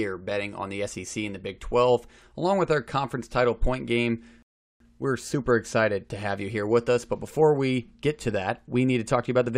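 At 4.42 s the speech halts in a rebuffering stall: playback ran dry of downloaded audio and paused for about 0.38 s until 4.80 s. Unlike a dropout, it resumes exactly where it stopped, so nothing is skipped; the silence simply adds time.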